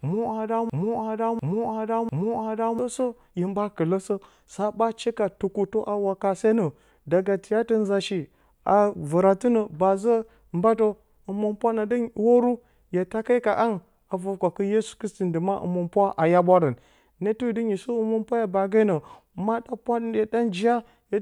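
A broken-record loop runs from 0.0 to 2.79 s, already under way as the clip opens: one 0.70 s fragment of speech repeats exactly, back to back, three times. A stalled player or stream likely kept resending it, losing the speech due there.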